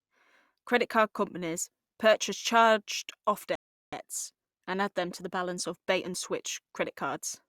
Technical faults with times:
3.55-3.93 rebuffering stall

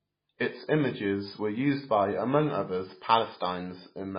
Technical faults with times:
0.00-4.18 MP3 compression

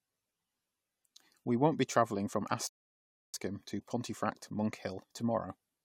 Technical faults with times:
2.67-3.34 rebuffering stall

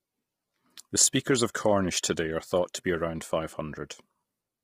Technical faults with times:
0.00-4.63 low-delay AAC compression

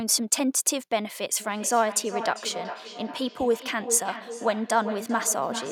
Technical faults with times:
1.40-5.71 feedback echo between two devices

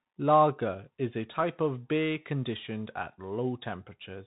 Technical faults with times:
0.00-4.27 Bluetooth CVSD headset codec

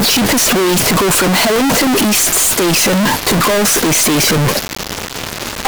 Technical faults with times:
0.00-5.67 float read as integer

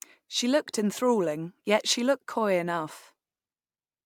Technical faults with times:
none

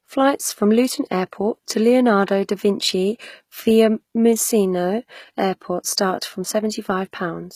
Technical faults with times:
0.00-7.55 HE-AAC compression
2.26-2.28 pre-echo

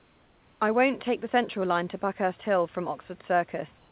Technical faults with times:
0.00-0.60 comfort noise in place of the background
3.78-3.91 comfort noise in place of the background

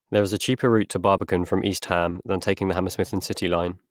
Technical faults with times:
1.17-1.21 short concealed packet loss
2.09-2.17 short concealed packet loss

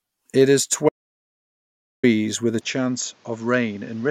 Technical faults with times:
0.89-2.03 audio dropout to silence
2.61-4.10 input switched to a poorer device

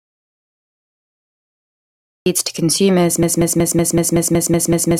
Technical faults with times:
0.00-2.26 audio dropout to silence
3.23-5.00 broken-record loop

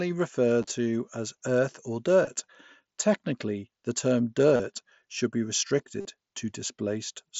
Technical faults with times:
0.62-0.70 concealed Bluetooth headset packet loss
2.25 concealed Bluetooth headset packet loss
4.56-4.60 concealed Bluetooth headset packet loss
6.00-6.05 concealed Bluetooth headset packet loss

